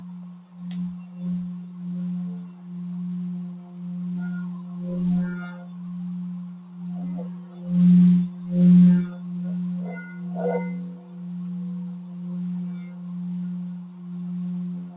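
A noise suppressor applied to music or sounds is active throughout the clip. Processing designed for speech treats sustained tones, ambience and decay tails as background noise and pulls them down, while sharper onsets pass largely intact. Level swings of roughly 5 dB make held sound pump and flutter, and the tails thin out. Everything sits below 4 kHz, which fits a G.711 mu-law call path at 64 kbps.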